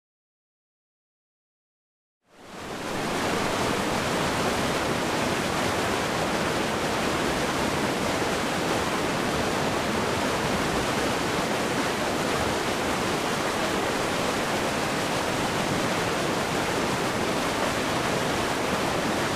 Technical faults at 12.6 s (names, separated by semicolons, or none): none